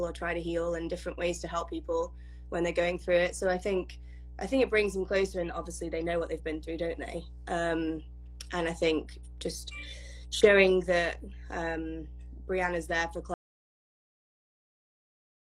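Mains hum runs throughout: a steady 60 Hz tone sitting about 15 dB below the sound, from a ground loop or nearby transformer leaking the power line into the signal. An audio dropout to silence starts at 13.34 s and lasts to the end. The input was likely lost, so only silence remains, with no room tone.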